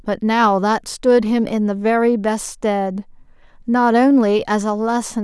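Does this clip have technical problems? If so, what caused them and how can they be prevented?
No, no technical problems can be heard in this speech recording. With nothing going wrong, there is no cause to trace and nothing that needs preventing.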